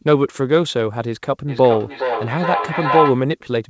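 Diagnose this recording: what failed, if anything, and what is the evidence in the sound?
Feedback howl, in the acoustic loop between playback and microphone on the call. From 1.48 s to 3.26 s a tone near 1 kHz rises out of the speech. It peaks about 3 dB below the speech level. It pulses roughly every 400 ms, the loop's round-trip delay. Two devices in one room share the call. Each pass through loudspeaker, air and microphone adds gain. So the repeats grow and narrow to that frequency.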